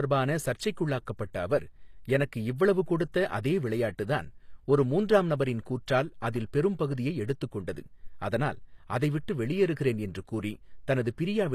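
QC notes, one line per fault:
Throughout, HE-AAC compression, likely cause: the treble is rebuilt by copying lower bands upward under a coarse envelope, so harmonics misalign and sibilants sound gritty and metallic. Nothing is heard above 14.9 kHz, and the plainly audible damage fits a bitrate near 24 kbps.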